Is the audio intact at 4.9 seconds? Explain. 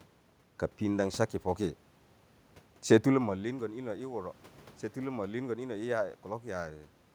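Yes, the audio is intact at 4.9 s; the only thing there besides the speech is the room's own background noise, which belongs to the recording rather than to any fault.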